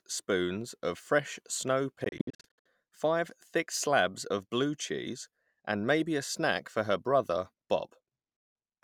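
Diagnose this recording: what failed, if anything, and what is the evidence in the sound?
Wireless playback failed, likely through a Bluetooth dropout. From 2.04 to 2.66 s, between "spoons of fresh snow" and "five thick slabs of", the speech breaks into gaps, the longest 61 ms. It cuts out again from 8.37 to 8.55 s. Late packets were dropped, and the speech resumes as if it had played on.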